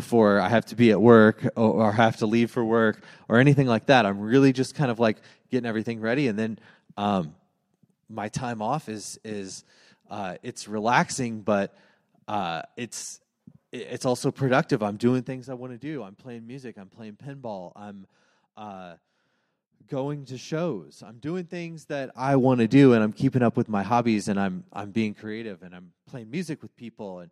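At 21.94 s, right after "shows I'm doing things", the level climbs about 15 dB over roughly three quarters of a second, ending by "and I'm keeping up". It moves in tiny hard steps, around 40 a second, and each one clicks, so you get zipper noise ticking along under the speech. It happens again at 25.01 s after "hobbies and I'm I'm", this time dropping about 15 dB in 1 dB jumps until "and I'm playing" at 25.43 s.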